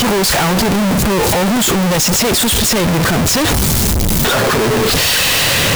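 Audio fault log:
Throughout: float read as integer. The speech is extremely loud and harsh, with a nearly square waveform sitting at an almost fixed, high level. Background noise is as loud as the speech, yet pitch can be followed. The likely cause is 32-bit float samples read as 32-bit integers, so sign and exponent bits set the level.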